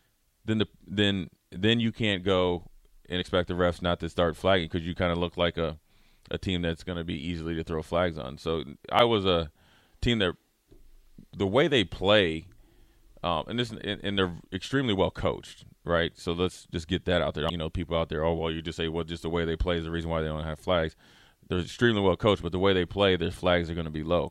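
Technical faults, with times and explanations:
3.21 to 3.23, 8.99 and 17.49 s: damaged data in a compressed stream. Each event is a single brief disturbance of about 20 ms or less: after "you can't go and", just before "was a team that", and after "that out there I". Corrupted bytes made the decoder misread or reject those frames and lose sync until it found the next frame header. Unlike a regular buffer fault, the three events fall at irregular times.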